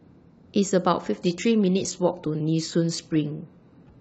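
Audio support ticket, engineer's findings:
Adaptive stream at a lower bitrate, speech, 1.13 s to end. Abrupt quality step with no gap: treble collapses, upper band turns synthetic and swirly, artefacts rise. Sound fits a switch from a clean AAC-LC rendition near 96 kbit/s to HE-AAC near 16 kbit/s, with high frequencies rebuilt by spectral band replication. Probable component: player's bitrate adaptation reacting to a slowed connection. Spectrogram: hard vertical edge at 1.13 s, then smeared, patchy energy above the core band. Waveform: continuous, no dropout.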